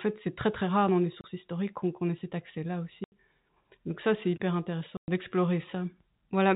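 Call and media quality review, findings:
Packet loss filled with silence. Hard-edged dropouts: 1.21–1.24 s (30 ms, between "très rare dans les" and "historiques qu'on ait cet"), 3.04–3.12 s (80 ms), 4.97–5.08 s (110 ms, after "ça c'est hyper"). Gap lengths step in 10 ms units, fitting 10 ms packets dropped in transport. Receiver inserts zeros instead of concealing. G.711 path audible as a 4 kHz band limit.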